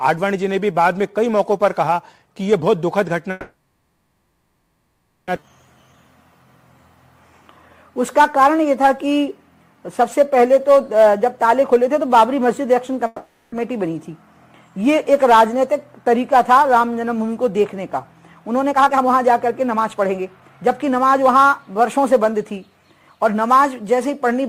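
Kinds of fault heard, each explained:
call audio freeze: Packets were likely held up in transit, leaving the jitter buffer empty, so the receiver extended the last sound as a fading buzz or hiss rather than silence, for 1.97 s from 3.31 s and 0.46 s from 13.06 s, then resumed where it stopped.
skip ahead: Right after the first freeze, a stretch of audio was dropped while later audio was already waiting, taking back the built-up delay. At 5.36 to 5.50 s playback jumps forward, with about two seconds of sound missing and the two sides joined almost directly.
short stall from a late packet: A single packet arrived after its playout time, briefly starving the jitter buffer, so the receiver stretched the preceding sound for 20 ms at 5.40 s, inside the jump, before continuing. Nothing is lost, but the sound is held briefly.
jitter buffer speed-up: The jitter buffer held more audio than its target, so the receiver repeatedly cut short pitch-period slices to shrink the delay. 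From 18.71 to 22.45 s the sound runs at 112% speed, same pitch, about half a second removed.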